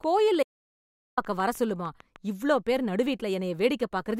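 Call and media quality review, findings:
Train of clicks, 0.04 to 2.17 s, on speech. Regular ticking at about 6.6 clicks per second, roughly fifteen in total, near-identical in shape, peaking at roughly the level of the speech itself. Probable component: likely electrical interference coupling into the capture path or an interface repeatedly faulting. Each event injects a short pulse into the signal, and the steady spacing indicates a periodic source rather than random damage.

Audio dropout to silence, 0.43 to 1.17 s, about 744 ms. Speech cuts off abruptly and resumes abruptly. The gap is silent, with no room tone or noise floor. Probable component: input path lost upstream of the encoder, likely a device disconnect, a link failure or a momentary mute, while the recorder kept writing silence. Speech during the gap is unrecoverable. The gap falls inside the click span.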